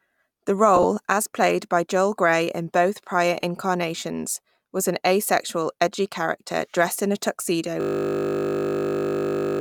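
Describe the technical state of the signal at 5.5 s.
At 5.5 s the speech signal is intact, with no fault present; it carries only light lossy compression, working as intended.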